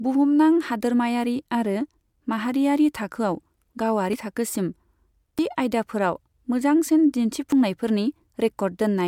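Jumps in the speech at 3.16, 4.13, 5.39 and 7.52 s point to a likely dropped buffer (overrun), each skipping roughly 20 to 70 ms.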